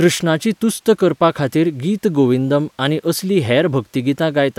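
No technical faults can be heard in the speech. Nothing in the audio points to a problem anywhere in the recording or playback chain.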